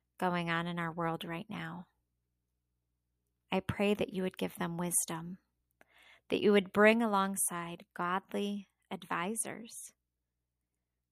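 No dropouts, distortion, noise bursts or timing problems can be heard anywhere in the recording, and the signal stays steady and continuous throughout.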